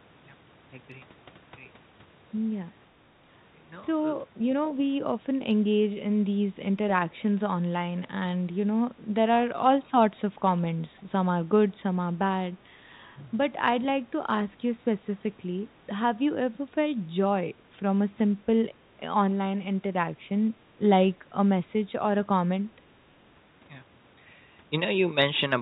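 From 9.15 to 9.23 s, speech suppressed in double talk: the echo canceller likely mistook overlapping talk for echo, briefly pulling the speech down by roughly 25 dB. From 10.97 to 11.02 s, an echo leak, likely residual loudspeaker pickup sent back, adds a very faint copy about 0.5 s late, around 40 dB under the speech, heard within the call path's band that stops at 4 kHz.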